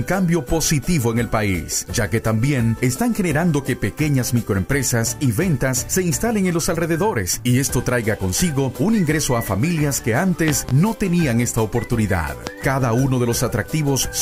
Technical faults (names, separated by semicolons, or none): loud pop